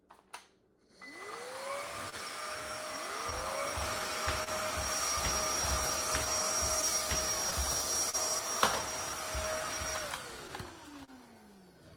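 Sounds, affected throughout by clock drift between sender and receiver: the sender's clock runs roughly one and a half percent slower than the receiver's, so the jitter buffer keeps draining and the receiver repeats short pieces to keep pace, leaving small timing hiccups at uneven intervals across the whole clip. A short stall from a late packet occurs at 2.10 to 2.14 s and again at 11.05 to 11.10 s. Each time a packet missed its slot, the buffer ran dry, and the last sound was held for about 27 ms and 30 ms respectively before playback resumed from the same point, with nothing lost. A doubled audio track runs from 2.86 to 8.39 s, where a full-band copy trails the original by about two seconds at about the same level, with no decay or room colour and abrupt entry and exit, likely from a second, slower capture path mixing the same audio back in. Scattered short gaps appear from 3.30 to 4.49 s, about three of them with the longest near 30 ms, and from 6.25 to 8.15 s, about four with the longest near 40 ms. 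Each is a lost or late packet patched by continuing the previous sound, heard as brief ticks or smears.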